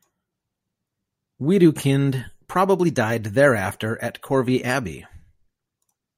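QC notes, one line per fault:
1.01 to 4.98 s, clock drift buffer slips: a click pops up about every 1.32 s while you're talking, four or so in all. Likely two devices on unsynced clocks, off by roughly 700 ppm, so the buffer periodically drops or repeats around 50 samples.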